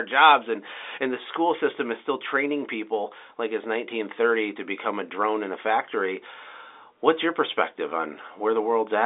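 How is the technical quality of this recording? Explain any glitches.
The technical quality holds up, and there are no glitches to explain in this telephone-band speech.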